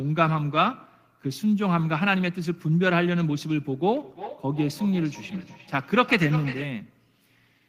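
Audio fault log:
3.93–6.79 s feedback echo between two devices: speech returns about every 0.4 s, up to about 13 dB below the direct sound, thin and ringing, as a nearby device replays it into an uncancelled microphone. Spectrogram: faint, evenly spaced syllable copies; waveform: smaller trailing bursts.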